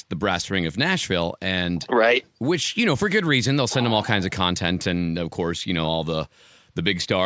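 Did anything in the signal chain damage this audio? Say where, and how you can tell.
No, nothing in the signal chain audibly damaged this speech recording, and no stage from capture to playback leaves a detectable mark on it.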